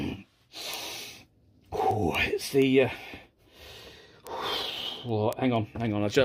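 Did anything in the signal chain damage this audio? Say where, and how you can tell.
Yes. An unlocked digital link between devices, with clocks roughly 200 ppm apart, slips a sample about every 0.1 s, causing word clock ticks from 0.15 to 6.15 s.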